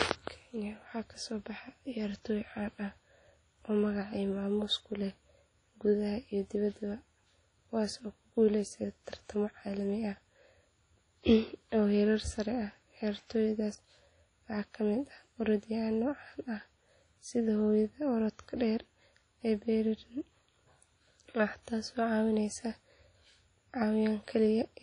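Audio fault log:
Throughout: WMA compression, likely, heard as a ringing, washy smear over the speech and a hiss that swells and fades with each syllable. A transform codec working in long blocks lets its quantisation noise spread over tens of milliseconds around every onset, and at this rate weak spectral lines are zeroed, leaving a thin, watery texture. Nothing is present above about 10.1 kHz, and the plainly audible damage fits a 32 kbps encode.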